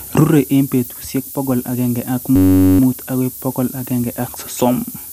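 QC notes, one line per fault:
Throughout: low bit depth with noise shaping. A steady, thin hiss sits under the speech and climbs sharply toward the top of the band, roughly 10 dB below the signal. Only about 6 bits carry the audio, and the rounding error is pushed upward in frequency.
Throughout: MP2 compression. The speech sounds dull, with a gurgling, granular roughness and upper bands flickering in and out; nothing survives above about 15.7 kHz. This likely comes from MPEG Layer II at a low rate, around 80 kbps, starving upper sub-bands of bits.
2.36–2.80 s: system hang loop. A steady buzz at about 94 Hz replaces the speech as a 10.67 ms slice repeats 41 times. The playback froze while the hardware kept cycling one ring buffer, which fits a 512-sample buffer.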